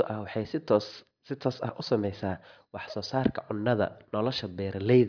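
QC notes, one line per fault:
No faults found in this speech clip. Nothing in it calls for a QC note.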